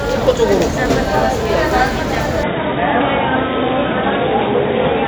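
An input switch to a poorer device, most likely, occurs at 2.43 s and lasts to the end. With no gap at the changeover and little change in loudness, the sound abruptly narrows and turns dull and boxy: nothing above 3.8 kHz gets through from that point, as the replacement device passes only a restricted band. It also brings its own faint background noise, sitting roughly 35 dB beneath the sound.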